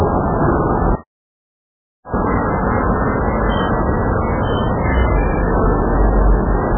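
MP3 compression, heard across the whole clip: nothing sounds above about 3.2 kHz, and the remaining detail is watery and swirly, with smeared attacks on these sounds. The likely cause is an encoder starved of bits, consistent with a rate near 8 kbps, cutting the treble and dropping weaker components frame by frame.

Catch-up at higher speed, from 2.14 to 5.14 s: after a stall, the player works through its backlog by resampling at 1.25 times normal speed, so the sound runs faster and rises by roughly four semitones before returning to normal pitch and pace.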